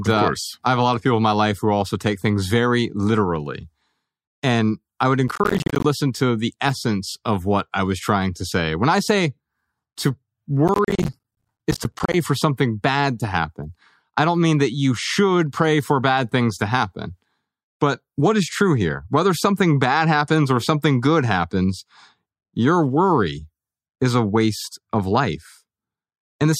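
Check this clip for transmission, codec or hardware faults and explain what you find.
Two bursts of processor overload crackle occur, from 5.28 to 5.85 s between "I would" and "to the essence of", and from 10.68 to 12.14 s before "for something bad to". Missed deadlines for roughly 10 ms buffers drop many short chunks to silence, giving gritty tearing. The waveform shows repeated gaps to near silence, and the spectrogram shows dense vertical broadband streaks.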